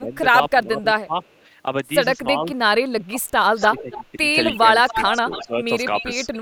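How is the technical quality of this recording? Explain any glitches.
The quality is compromised by two recurring call-processing faults affecting most of the clip.

Speech suppressed in double talk occurs from 0.00 to 1.14 s and again from 2.36 to 6.10 s. The speech dips by up to about 15 dB, then about 20 dB, in pieces totalling roughly half a second and one and a half seconds. This is likely an echo canceller muting both sides during overlap. On a waveform the envelope shows abrupt notches; a spectrogram shows thinned upper bands.

Echo leak appears faintly from 1.23 to 1.33 s, delayed 304 ms and about 40 dB down. It returns far louder from 3.60 to 6.39 s, delayed 277 ms at about 10 dB below the speech. It is likely residual loudspeaker pickup passing the canceller, and it appears on a spectrogram as a shifted, ghosted copy of the speech pattern.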